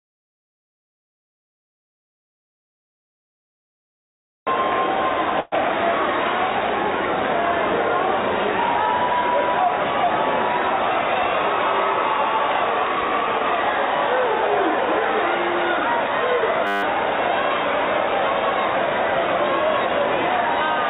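The audio comes through a narrowband call path, with nothing above 4 kHz, which fits G.711 mu-law at 64 kbps. From 5.4 to 5.54 s a call audio freeze stretches the last sound into a fading buzz or hiss for about 118 ms. The likely cause is a jitter buffer running empty. Nothing is lost, and everything after arrives 118 ms late. From 16.67 to 16.83 s a system hang loop repeats one 10 ms slice exactly, 16 times, giving a steady 100 Hz buzz. Unlike the freeze's decaying fill, it holds steady without fading.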